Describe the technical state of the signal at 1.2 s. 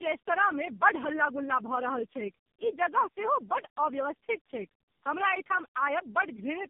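At 1.2 s, as throughout, there is tandem speech coding. Three speech codecs re-encode each other's output. It sounds rough and warbly, with nothing above 3.5 kHz.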